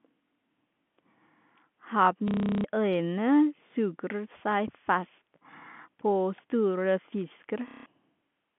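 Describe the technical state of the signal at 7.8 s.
At 7.8 s the sound breaks into a short robotic stutter, a rapid buzzing repetition, running from 7.68 to 7.86 s. This is packet loss with the last packet repeated: about 180 ms of audio went missing, and the receiver replayed the final good packet until fresh data arrived. The repeats seldom align with the pitch period. The buzz rate fits roughly 30 ms packets.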